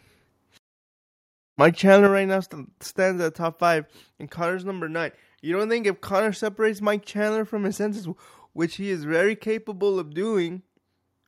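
From 1.64 to 2.06 s the speech turns harsh and crackly on its loudest peaks: microphone overload, likely driving the converter about 2 dB past its limit and flattening a small fraction of samples. At 2.07 s, just before "right now", the speech and background drop abruptly by about 7 dB. This microphone volume step-down is likely the call software cutting input gain after the clipping.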